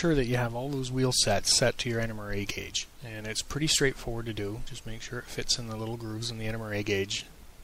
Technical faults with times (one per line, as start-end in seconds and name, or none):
none